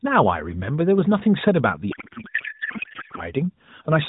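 A speech clip carried over the AMR narrowband mobile codec, band-limited below 4 kHz with light coding damage that fits its 12.2 kbps mode, is hit by a codec payload misread from 1.92 s to 3.24 s. Octet-aligned AMR frames are being unpacked as bandwidth-efficient ones, so every parameter lands in the wrong field and the speech turns into garbled warbling noise that barely follows it. Packet-loss concealment would instead repeat or fade the last sound, whereas this starts and stops abruptly.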